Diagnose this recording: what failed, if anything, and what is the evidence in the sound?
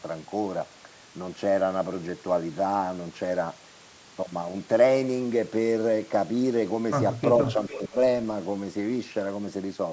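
Echo leak at the call-processing stage: from 7.43 to 7.94 s a faint copy of the speech trails the original by about 0.44 s, around 10 dB lower. On a spectrogram, the harmonic pattern repeats, dimmer and shifted right. This is likely the far end's echo canceller letting loudspeaker pickup escape.

Speech suppressed in double talk, also in call processing: between 7.55 and 7.95 s, while that echo overlaps, the speech itself dips by as much as 15 dB in short bursts totalling roughly 150 ms. The waveform shows notched envelope gaps, and the spectrogram shows brief vertical pale bands. The likely cause is the canceller attenuating everything when both signals coincided.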